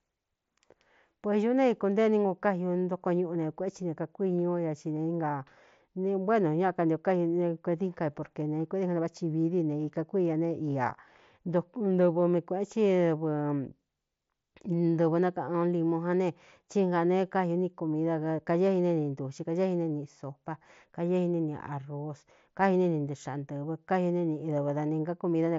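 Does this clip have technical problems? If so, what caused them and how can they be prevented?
No, the speech arrives through what sounds like a Bluetooth mSBC headset link working as designed, with its content stopping near 7.7 kHz as that wideband path allows and no dropouts, glitches or level problems anywhere in the recording.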